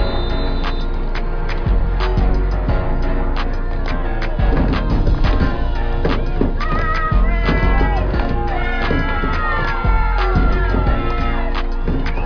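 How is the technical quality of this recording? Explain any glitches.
No glitches, dropouts or other technical faults can be heard anywhere in the recording.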